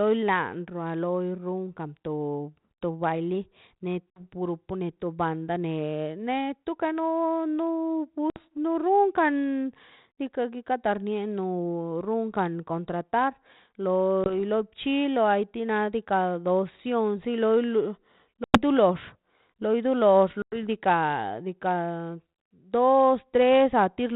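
Hard-edged silent gaps at 4.10, 8.30 (just after "ne neto no no"), 14.24, 18.44 and 20.42 s, each followed by slightly distorted speech, mark packet loss on an ADPCM call. The decoder's predictor loses step with the sender's before resettling.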